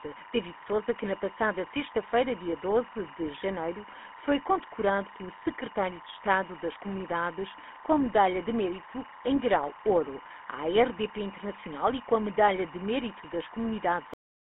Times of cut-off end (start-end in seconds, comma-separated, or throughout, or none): 14.14-14.54